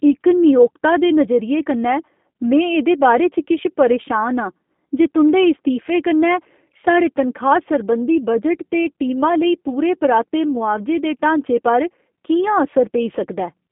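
Speech coded with G.729 throughout: the telephone band of 200 Hz to 3.5 kHz strips the highs, and the sparse pulse excitation at 8 kbit/s gives a plainly rough, synthetic texture.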